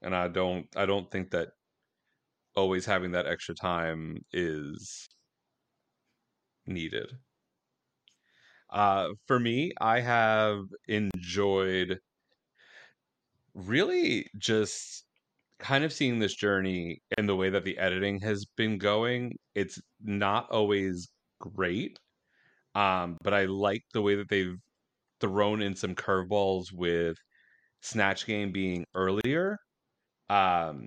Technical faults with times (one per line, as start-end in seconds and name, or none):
5.07-5.11 gap at a join of encoded pieces
11.11-11.14 gap at a join of encoded pieces
17.14-17.18 gap at a join of encoded pieces
23.18-23.21 gap at a join of encoded pieces
29.21-29.24 gap at a join of encoded pieces